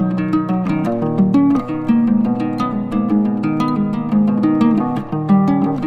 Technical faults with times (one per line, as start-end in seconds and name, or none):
none